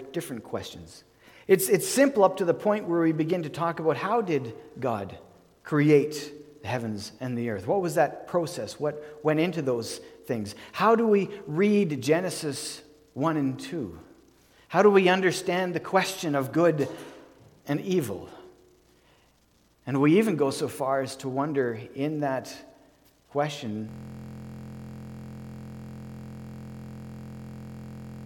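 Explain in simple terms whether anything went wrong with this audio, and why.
Something did go wrong near the end. From 23.89 s to the very end, the audio turns into a system hang loop. The computer or its audio driver froze, but the sound hardware kept replaying the last chunk it had been given, over and over. That chunk is only 23.22 ms long, which fits a 1024-sample buffer, so instead of a stutter you hear a steady buzz at about 43 Hz, repeating roughly 190 times until the clip ends.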